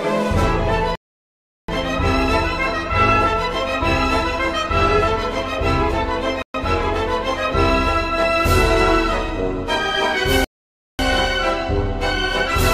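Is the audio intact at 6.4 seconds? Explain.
No. From 6.42 to 6.54 s the audio drops out completely for about 0.12 s and then resumes, a Bluetooth stall. The likely cause is radio interference delaying packets until the headphones' buffer emptied, so playback halted while waiting for retransmissions. It sounds like an abrupt hole in the sound. On a waveform it appears as a flat line between sharp edges, and on a spectrogram as a narrow blank vertical strip spanning every frequency.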